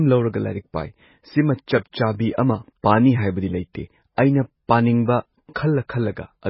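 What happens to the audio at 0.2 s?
The speech at 0.2 s already sounds watery and swirly, with smeared onsets and nothing above 5.6 kHz, as it does throughout. The likely cause is heavy MP3 compression, which fits a very low bitrate around 16 kbps: the encoder cuts the treble and lets weak frequency lines flicker between frames.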